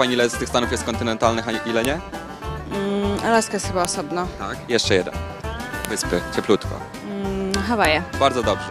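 A sharp, loud click snaps through the sound at 1.85, 3.85, 5.85 and 7.85 s, each one brief and landing regardless of what the signal is doing. The clicks repeat every 2 s, which points to the file header played as audio: separate 2-second WAV pieces were joined or streamed with their headers left in, so those few dozen header bytes were read as samples at the start of each piece.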